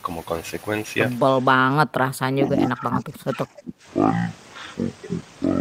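At 1.18 s the speech drops into a section at the wrong speed that runs to the end of the clip. It plays at 0.525 times its proper rate, so the voice turns deep and dragged, roughly ten semitones lower. This is likely a playback or edit step running on the wrong clock. On a spectrogram, harmonics and formants all shift down to about half their height at that point, and syllables stretch out along the time axis.

From 1.86 to 3.85 s, inside that slowed section, the speech is suppressed in double talk, likely because an echo canceller could not tell the talker apart from loudspeaker echo while both sides spoke and turned everything down. Across roughly one and a half seconds the voice dips, thins and breaks up, falling by about 25 dB at its deepest. The waveform shows the envelope collapsing in uneven bites, and the spectrogram shows patchy gaps with the upper bands fading.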